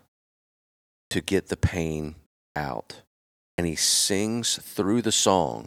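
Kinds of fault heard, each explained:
Clipped start after a pause: the output device drops into a sleep state during silence and needs a moment to wake, so about 40 ms of speech is cut off at 1.07, 2.52 and 3.54 s. This happens before "get the pain", after "get the pain" and before "he sings", and each time the sound jumps in abruptly with its first part missing.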